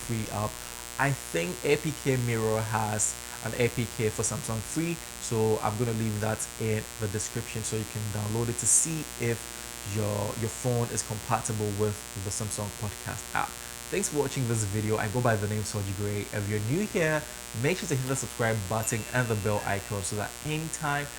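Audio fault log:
throughout, mains buzz: A steady, raspy buzz sits under the whole clip, loud enough to stand out at roughly 10 dB below the wanted sound. Its edge comes from sharp switching spikes entering the signal twice in each 60 Hz mains cycle, 120 times a second, as a dimmer, rectifier or missing shield would allow. Because the spikes are so abrupt, their energy spreads into 60 Hz harmonics reaching several kHz, giving the hum its gritty texture.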